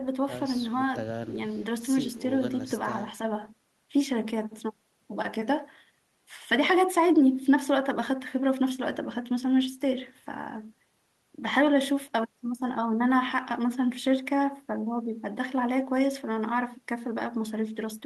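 Nothing in this speech recording stands out as a technical problem; it just runs along from beginning to end without anything catching the ear.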